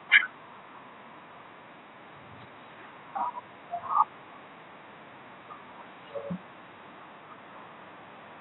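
No technical faults can be heard anywhere in this speech clip.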